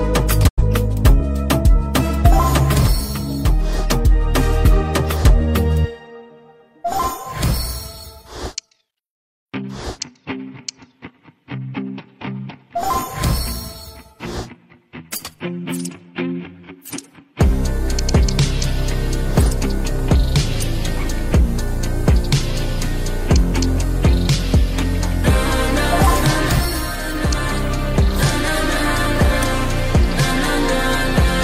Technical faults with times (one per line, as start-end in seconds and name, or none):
0.47-0.63 digital broadcast dropout